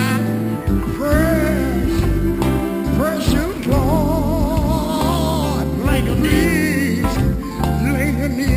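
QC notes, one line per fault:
Throughout: imaging from sample-and-hold upsampling, a metallic fizz between 6 and 12 kHz at about 21 dB below the sound, pointing to 12 kHz audio repeated up to 44.1 kHz unfiltered. Unlike steady hiss, it tracks the sound's level and moves opposite to its pitch.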